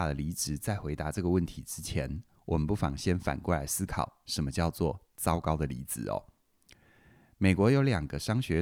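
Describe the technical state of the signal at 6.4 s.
At 6.4 s the speech signal is intact, with no technical fault at that moment.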